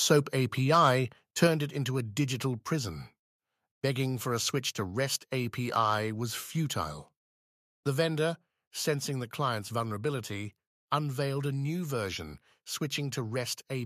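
Microphone overload at 0.74–0.89 s and 1.42–1.45 s adds a harsh crackle, likely from input driven about 2 dB past the converter's limit. The waveform peaks look flat-topped, with broadband smearing on the spectrogram. Microphone volume steps down at 1.47 s, about 4 dB before "it into a digital", and at 8.31 s, about 1 dB before "sensing the client's vulnerability". This is likely the software cutting input gain. Voice and background drop together, and the waveform envelope shrinks abruptly.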